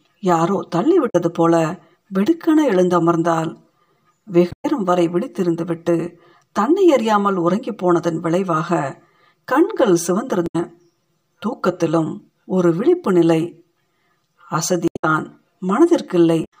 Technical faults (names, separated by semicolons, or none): channel delay (comb filtering); damaged data in a compressed stream